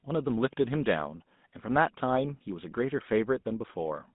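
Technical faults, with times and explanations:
Throughout, GSM full-rate codec: the speech passed through an early mobile speech coder at a rate that fits 13 kbps, modelling the vocal tract and exciting it with sparse regular pulses, so voicing turns buzzy and gravelly, with nothing above 3.8 kHz and a narrow line band.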